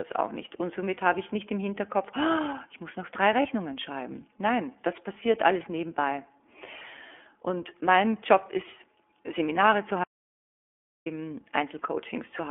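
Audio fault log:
Throughout: iLBC codec. The speech is confined to a narrow telephone band of roughly 250 to 3400 Hz, with nothing above 4 kHz. Each 30 ms frame is coded on its own, which fits a 13.33 kbps iLBC stream. The damage is plainly audible as a rough, slightly synthetic edge.
3.42 to 3.46 s: lost iLBC frames. Right after "ich muss noch drei", about 30 ms of audio goes missing, which points to a single lost frame. The decoder fills the gap by repeating the last pitch cycle mixed with noise. This gives a brief buzzy, held sound. The voice recovers almost at once.
10.04 to 11.06 s: audio dropout to silence. The speech cuts out mid-flow for about one second and returns abruptly. The gap is silent with no room tone. The input was likely lost while recording continued writing silence. Whatever was said in that second is gone.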